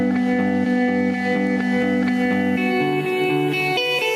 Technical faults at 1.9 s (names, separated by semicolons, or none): gain pumping